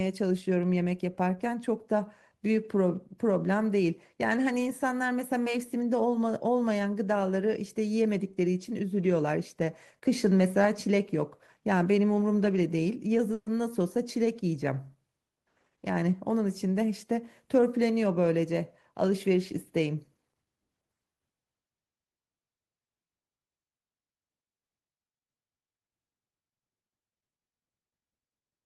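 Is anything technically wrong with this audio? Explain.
Yes, there are two faults, both in the middle of this speech clip.

From 13.33 to 13.48 s there is a call audio freeze. The last sound is held and drawn out as a brief fading buzz or hiss for about 130 ms, and then the speech resumes exactly where it broke off, with nothing lost. The likely cause is that packets were briefly held up in transit and the jitter buffer ran dry, so the receiver stretched the final sound to fill the wait, adding 130 ms of delay.

From 15.35 to 17.12 s there is a jitter buffer speed-up. The speech sounds hurried, running at 108% of normal pace while the pitch stays unchanged. The buffer held more audio than it aims for, so the receiver trimmed short slices of one or a few pitch periods over and over, cutting out around 150 ms in total to bring the delay back down.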